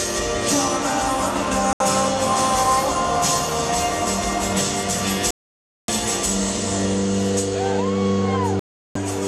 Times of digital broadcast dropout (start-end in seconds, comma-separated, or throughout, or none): 1.73-1.81, 5.31-5.89, 8.59-8.96